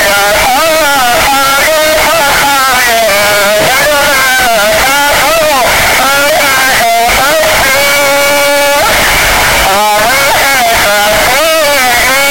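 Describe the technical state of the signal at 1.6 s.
At 1.6 s, as across the whole clip, the signal shows a float-read-as-integer fault: the waveform sits as a near-square block at an almost fixed, high level, very loud and harsh, with background noise as loud as the foreground. This is likely 32-bit float samples being interpreted as 32-bit integers, so the sign and exponent bits dominate each value.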